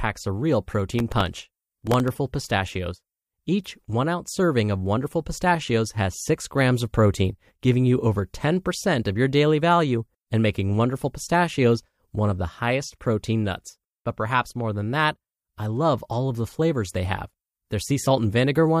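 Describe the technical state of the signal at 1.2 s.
At 1.2 s the signal is inside a burst of processor overload crackle that runs from 0.90 s to 2.08 s. The processor cannot finish each small audio buffer in time. Deadline after deadline is missed. Each miss replays a scrap of old audio with hard edges. The skips are tiny, which fits buffers of only a millisecond or two, perhaps a few dozen in all. Together they lay a gritty, tearing crackle over the speech.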